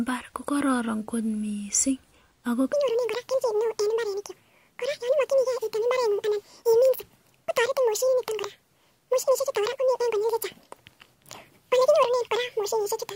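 This is a speech clip. From 2.73 s to the end, the audio is read two samples at a time, so it plays at double speed. Each pair of samples is treated as one frame. Pitch jumps a full octave, 12 semitones.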